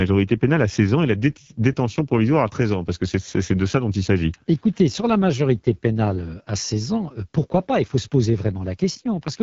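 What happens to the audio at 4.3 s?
At 4.3 s you're hearing the AMR wideband (HD Voice) codec, and it runs the whole clip rather than just that moment. It models speech up to 6.4 kHz with a pulse-excited vocal tract and fills 6.4 to 7 kHz with shaped noise, so nothing sits above about 7.3 kHz. The damage is plainly audible, a rough, raspy texture on the speech that points to one of its lowest rates, around 8.85 kbit/s.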